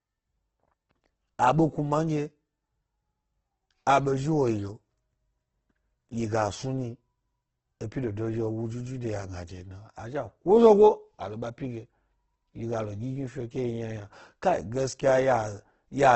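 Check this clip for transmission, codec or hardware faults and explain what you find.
The clip has one fault, present from start to end. Throughout, the speech sounds grainy and rough, with a noisy texture over its tones and nothing above 8.2 kHz. The likely cause is Opus compression in its music mode at a rate that fits roughly 12 kbps: bands the encoder cannot afford are refilled with folded or noise-like content rather than left empty.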